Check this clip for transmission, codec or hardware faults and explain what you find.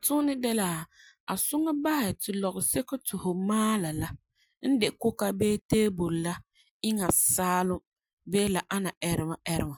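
Nothing wrong turns up anywhere in this speech recording, so there's no transmission, codec or hardware problem to report.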